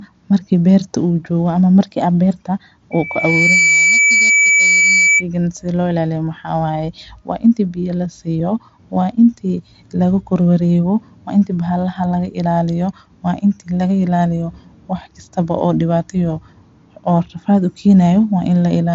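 Just after "ama markii ah beerta", at 2.91 s, a single tone near 2.3 kHz rises out of the speech, swelling over roughly 0.7 s into a steady squeal that sits about 5 dB above the talker until it cuts off at 5.24 s. This is loudspeaker feedback squeal. The microphone was hearing the loudspeaker it fed, and around 2.3 kHz the round trip gained more than it lost, so that one frequency kept reinforcing itself.

At 8.40 s, between "intii biyo la" and "waa intii lagu kordhwar", the sound freezes for about half a millisecond. The waveform flattens at whatever level it had reached and then carries on with nothing missing. This is an underrun with held sample. The output buffer briefly ran dry, and the converter held its last value until fresh data arrived. Because playback resumed exactly where it paused, the join is nearly seamless. Throughout the clip, the Bluetooth mSBC link limits content to below about 7.8 kHz.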